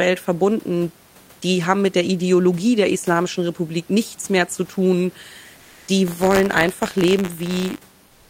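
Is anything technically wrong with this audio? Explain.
Yes, there are two kinds of fault.

Comfort noise in place of the background appears from 5.57 to 5.87 s, right after "nichts mehr zu tun", and again from 8.07 s to the end at 8.29 s. The sender likely stopped transmitting during the pause under Opus DTX, and the receiver filled the gap with synthetic noise. The room noise, about 33 dB below the speech, loses its detail and turns into a flat hiss, about 2 dB louder in the first gap and about 1 dB quieter in the second.

Buffer tearing runs from 6.07 to 7.97 s. The writing and reading positions in the playback ring buffer have slipped and cross every period. A small slice of each buffer, a few percent, carries audio from around 30 ms earlier, joined abruptly at both ends. The repeating discontinuities produce a robotic buzz at 100 Hz, which fits a 10 ms buffer period, and it is heard only while the speech is sounding.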